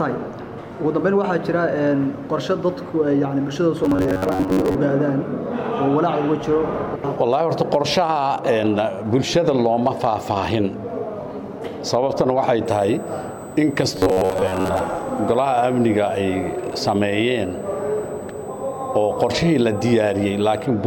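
Robotic sound from repeated short buffers appears from 3.84 to 4.75 s and again from 13.97 to 14.79 s. The sound becomes a stiff, metallic buzz at 93.8 Hz. The likely cause is new audio arriving too late, with roughly half of each stretch filled by looping a fragment about 10.7 ms long while the real material is dropped.

USB whine runs from 12.66 to 20.66 s as a steady 8 kHz tone about 30 dB below the signal. That pitch matches the bus's 125-microsecond microframe rate, whose current pulses reach the audio through shared power or ground. It overlaps the second robotic stretch.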